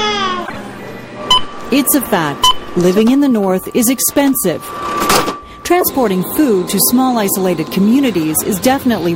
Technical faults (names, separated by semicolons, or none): corrupt frame decoded